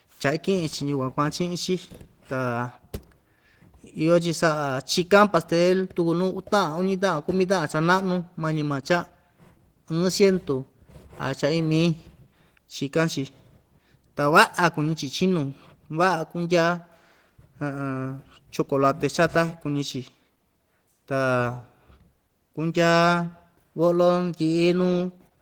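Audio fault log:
throughout Opus voice compression: the speech sounds plainly hoarse and slightly robotic, though the band still reaches 20.2 kHz. That fits Opus in hybrid mode at around 16 kbps, where linear prediction codes the low band with a coarse excitation and a transform layer covers the highs.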